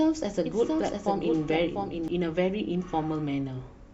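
From the start of the clip until 2.08 s the speech carries a doubled audio track: a second, full-band copy trails the original by roughly 0.7 s at about 5 dB lower, likely because the same signal was captured again through a slower path. Unlike an echo or reverb, the copy has no decay tail, no room colour and no repeats. It is simply a clean duplicate that ends abruptly at 2.08 s.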